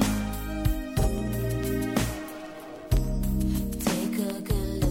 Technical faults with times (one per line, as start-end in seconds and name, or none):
1.00-1.05 repeated frames